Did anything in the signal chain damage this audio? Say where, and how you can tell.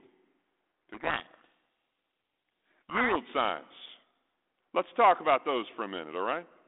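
Yes. From 0.94 to 3.16 s the speech is buried under harsh, grinding distortion, then clears abruptly. The damage happens at the codec stage: a codec payload misread, where the decoder unpacks each G.726 code word with its bits in the wrong order.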